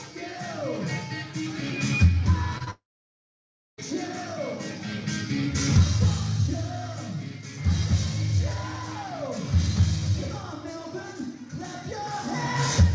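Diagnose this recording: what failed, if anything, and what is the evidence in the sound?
The trouble is on the network side of the call, and it starts with two bursts of short concealed packet loss, at 2.58 to 2.62 s and again at 2.64 to 2.69 s. Each is a quick smear or wobble where about 20 ms of audio never turned up in time. The receiver papered over each gap by stretching the previous sound for roughly 23 to 24 ms, then blended back into the real signal.

Right after that, at 2.71 s, things fall apart into what's most likely a long network dropout. You hear the concealment try to carry the last sound forward as a fading buzz or hiss, and then nearly a second of silence, about 980 ms, until the audio comes back at 3.80 s. Roughly 1.08 s of material is simply gone, so the sound resumes further along rather than picking up where it stopped. The G.722 band limit, with nothing above 8 kHz, stays in place throughout.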